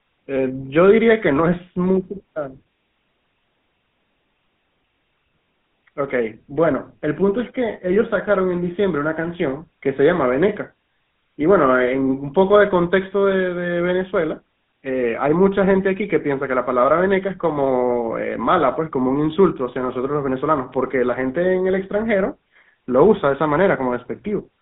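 The speech has passed through a GSM full-rate codec from start to finish, and the damage is plainly audible. The codec models the vocal tract and rebuilds the excitation from sparse, evenly spaced pulses, which fits its 13 kbps rate. The result is a buzzy, gravelly roughness. The sound sits in a narrow telephone band of roughly 150 Hz to 3.6 kHz, with nothing at all above 3.8 kHz.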